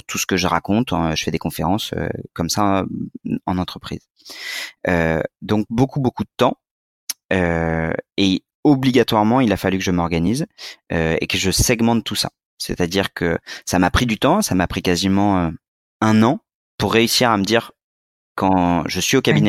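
No technical faults can be heard anywhere in this speech recording. There is no point in it that needs a time marked or a cause explained.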